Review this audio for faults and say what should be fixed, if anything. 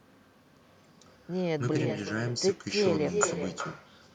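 Every phrase is followed, throughout, by a thinner copy arriving around 0.4 s later at about 7 dB below the original: echo with no canceller. The far end's loudspeaker output is picked up by its microphone and returned across the network uncancelled. Enabling acoustic echo cancellation at the far end, or having that participant use a headset, would prevent it.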